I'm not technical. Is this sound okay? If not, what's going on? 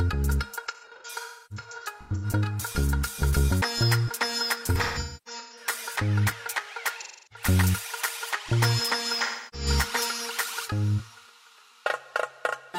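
No. There is AAC frame loss with concealment at 0.67–2.26, 4.75–5.66, 7.01–7.46 and 9.21–9.67 s. Chunks of sound went missing, and the player covered them with a smeared, noisy patch rebuilt from what came just before. The longest gaps are about a third of a second. Unlike a plain dropout, the gaps are never fully silent.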